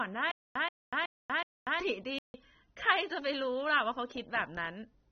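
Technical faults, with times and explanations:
Throughout, AAC compression: the encoder was likely running at a low bitrate, consistent with about 24 kbps AAC-LC, so it lowered its high-frequency cut-off and coarsely quantised what remained. The speech sounds dull and smeared, with plainly audible warbling and fizz on sibilants.
0.31–1.80 s, stutter with silent gaps: the stream likely stalled repeatedly, and each retry replayed the last 130 ms fragment before running dry. That same short burst returns four times, every 371 ms, separated by about 241 ms of digital silence, and the intervening speech is lost.
2.19–2.34 s, playback stall: the player likely ran out of data or had its output thread blocked, so nothing reached the output for about 156 ms. The speech cuts off mid-flow into silence, then resumes once the buffer recovers.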